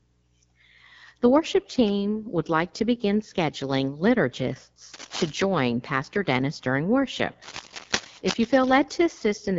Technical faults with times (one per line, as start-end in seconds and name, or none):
0.00-9.59 AMR wideband (HD Voice) codec
4.93-5.30 cable scratch noise
7.42-8.84 cable scratch noise